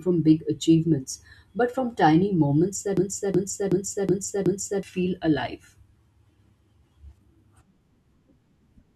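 A system hang loop runs from 2.97 to 4.83 s, just after "but from tiny moments": the computer or driver stalled while the sound hardware kept replaying the same ring buffer, which fits a buffer of about 16384 samples. One 0.37 s piece of the speech repeats five times at 2.69 Hz, a machine-gun stutter, and about two seconds of real audio never arrive before the speech resumes at "feel alive".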